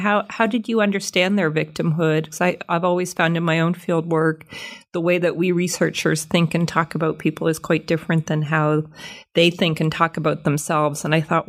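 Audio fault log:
Nothing to log here: the speech comes through with no faults heard anywhere along the way.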